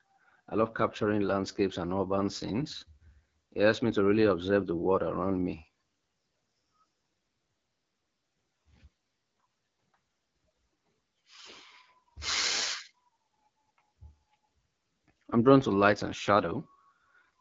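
From start to finish the speech sounds rough and raspy, with a grainy buzz, and the top of the spectrum is soft and hissy, with nothing at all above about 7.6 kHz. This is AMR wideband (HD Voice) coding working near the bottom of its range, which fits 8.85 kbit/s. At that rate the pulse model driving the vocal tract is coarse, and the highest band is filled with shaped noise rather than real detail.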